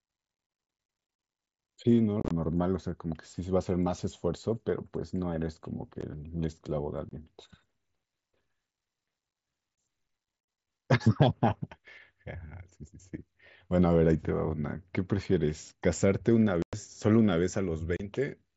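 There's unconcealed Bluetooth headset packet loss running through this speech, carried over an mSBC link that passes audio up to 8 kHz. Short voice packets between headset and phone went missing and were replaced by silence, leaving hard-edged holes that can click. Brief dropouts fall at 6.01, 7.09–7.11, 9.75–9.78 and 17.97–18.00 s. Two rougher patches follow. At 2.20–2.31 s many gaps are packed together and sound chopped and crackly. At 16.62–16.73 s about 105 ms of speech drops out almost in one piece.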